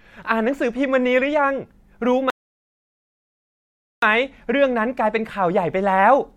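A speech recording interrupted by a rebuffering stall: the player exhausted its downloaded audio and paused until more data arrived. From 2.30 s to 4.03 s the speech drops to silence, then continues exactly where it stopped, losing nothing but adding about 1.72 s of dead air.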